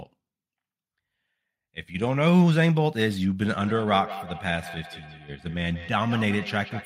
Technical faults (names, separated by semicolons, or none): feedback echo between two devices